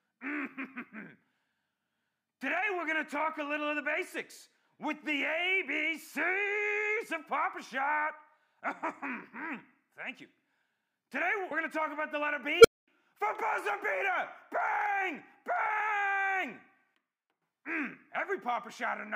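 At 12.60 s an unstable filter takes off: a tone around 500 Hz swells to a clipped squeal within about 41 ms, then overflows into roughly 230 ms of silence until 12.88 s.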